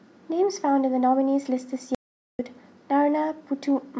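The input feed was likely cut off briefly while recording continued, so silence was written from 1.95 s to 2.39 s. The result is an audio dropout to silence: the speech breaks off mid-flow, leaving about 0.44 s of dead silence with no room tone, and that stretch is lost.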